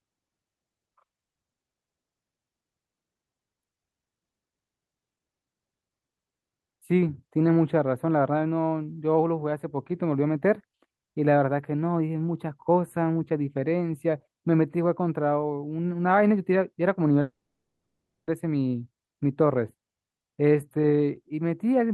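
Speech throughout carries channel delay (comb filtering). One channel trails the other by only a few samples, about a tenth of a millisecond, so the mono sum cancels near 5 kHz and its odd multiples. The result is thin and phasey, with fixed dark horizontal notch bands on a spectrogram. From 17.21 to 18.29 s, a long network dropout likely removed about 1.06 s of audio. A brief fading buzz or hiss smears across the spectrogram, then roughly a second of flat, near-empty waveform follows before speech resumes with that stretch missing.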